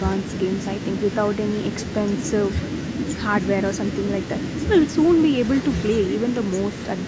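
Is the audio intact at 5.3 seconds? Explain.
Yes, at 5.3 seconds the speech is intact, with only the normal band limit of call microphone processing, which trims the lowest bass and leaves nothing above 8 kHz.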